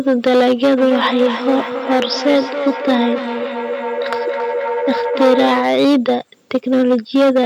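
A speech recording with two faults. Hard clipping runs through the whole clip. The signal is driven about 9 dB past what one stage can pass, so its peaks are sliced flat. Roughly 7 percent of the waveform sits on that ceiling. The flat tops add harmonics high in the spectrum, and every loud syllable gets a harsh, fuzzy edge. A feedback howl starts at 0.78 s and runs to 5.79 s. Two devices in the same room are joined on one call. Sound leaves a loudspeaker, enters a microphone and comes back louder on each pass. The repeats narrow to a tone around 500 Hz, the frequency this loop favours. The loop's delay is roughly 300 ms. At its loudest it sits about 7 dB below the speech. It stops when the loop is broken.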